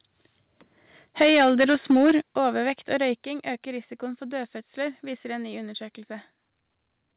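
Microphone overload runs from 1.2 to 2.16 s. The loudest syllables carry a harsh, crackling edge with flattened peaks, likely because the input level was set about 9 dB too high and drove the converter into its limit, clipping roughly one sample in seven.

Microphone volume stepped down three times, at 1.22, 2.22 and 3.24 s. Voice and background drop together by about 2, 8 and 5 dB. These are abrupt level falls rather than fades, likely the call software cutting the device's input gain after hearing clipping.

All of this sits inside narrowband call audio with nothing above 4 kHz, which fits a G.711 A-law path.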